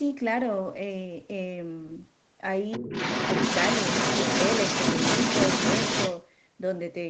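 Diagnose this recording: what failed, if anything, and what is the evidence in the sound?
From 2.71 s to 6.21 s a second voice runs underneath the talker, about as loud as the talker. This is the other side's voice leaking through at the call-processing stage, likely because the echo canceller left loudspeaker playback in the microphone signal.

From 2.78 s to 2.92 s the talker's speech ducks sharply, dropping by about 20 dB for roughly 150 ms. This is speech suppressed in double talk, likely because the echo canceller's suppressor, facing both voices at once, turned the whole microphone signal down.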